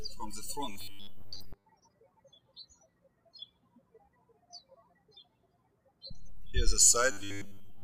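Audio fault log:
0.72–1.65 s and 7.12–7.84 s: robotic sound from repeated short buffers, a rigid metallic 100 Hz buzz, likely from a 10 ms chunk repeated while most of the real audio is skipped.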